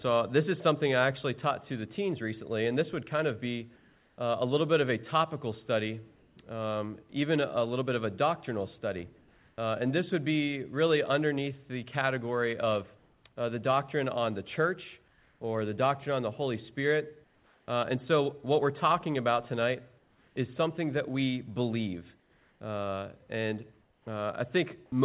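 Audio band-limited to nothing above 4 kHz, as a G.711 call path leaves it, carrying comfort noise in place of the background at 3.76–7.12 s, 9.18–9.58 s, 12.98–17.68 s and 19.98–24.06 s. The likely cause is discontinuous transmission. Unlike a gap or dropout, the pauses fill with steady, featureless hiss rather than silence. At 9.2 s it sits within about 1 dB of the real background, which is about 36 dB below the loud parts. At 7.1 s, sound is dropped by the voice detector, likely because it mistook the sound for background. About 20 ms is lost and replaced with that same flat noise, which sets it apart from a codec glitch or a clipped onset.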